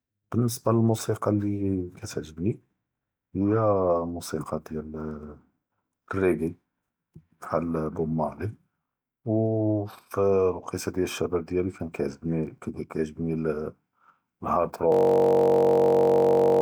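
Speech, and from 14.92 s to the end the sound collapses into a steady buzz at about 46.9 Hz. That is a system hang loop: the system froze while the sound hardware kept replaying one 21.33 ms slice of its buffer, which fits a 1024-sample ring buffer.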